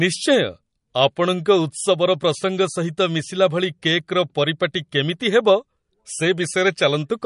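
From start to finish the speech has a hard ceiling at 10.6 kHz, with a watery, swirling texture and chirpy s sounds. That's likely MP3 compression at a low bitrate, around 40 kbps, where the encoder drops the treble and flickers weak frequency lines on and off.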